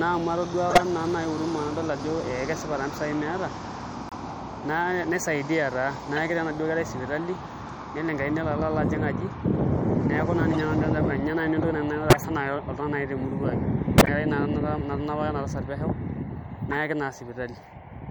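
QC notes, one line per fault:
throughout: MP3 compression, likely at a low bitrate around 64 kbps; treble is cut off and weak detail flickers, giving watery, swirly speech; spectrogram shows a hard high-frequency ceiling with speckled holes.
0.70–0.82, 4.09–4.13, 6.16–6.18, 10.53–10.60, 12.10–12.17, 13.98–14.09, 16.71–16.77: corrupt frame decoded; damaged frames played anyway put energy at wrong frequencies, heard as chirps and noise bursts, the loudest at 0.70, 12.10 and 13.98 peaking around -10 dBFS; spectrogram shows short vertical smears of misplaced energy, and the waveform shows brief spiky blocks lasting one to several frame lengths.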